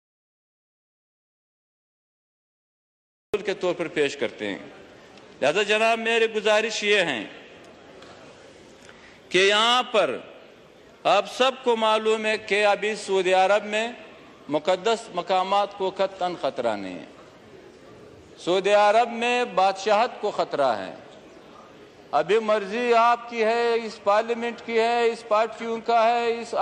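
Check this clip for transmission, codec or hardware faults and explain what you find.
One fault is present: an audio dropout to silence. It runs from the very start of the clip to 3.34 s. The gap is already under way when playback begins. It is complete silence, with no room tone or hiss. The input was likely lost, through a disconnected device, a failed link or a mute, while the recorder kept writing silence. At 3.34 s the sound comes back abruptly, mid-flow. Whatever came before that point is gone.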